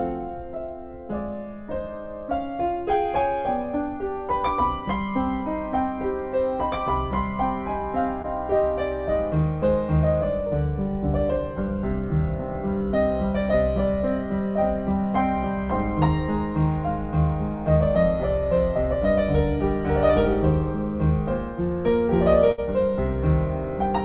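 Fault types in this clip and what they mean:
short concealed packet loss: A brief smear near 8.22 to 8.26 s, where about 15 ms of invented continuation covers a hole and then blends back. Roughly 20 ms of the real audio never arrives. The receiver extended the last sound instead of leaving silence.
burst of packet loss: At 22.52 to 22.60 s the sound stretches into a fading continuation about 62 ms long, then resumes further on with about 60 ms of audio gone. Several packets in a row failed to arrive in time, on a narrowband path that tops out at 4 kHz.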